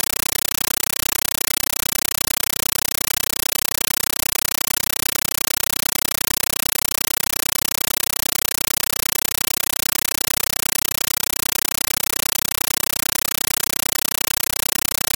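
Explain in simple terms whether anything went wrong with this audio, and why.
Yes. For the whole clip there is a compressed stream played as audio: the data points to a Dolby Digital stream sent as plain samples, undecoded. Each frame is a loud burst of noise about 9 ms long, repeating 31 times a second, which produces harsh chattering static throughout.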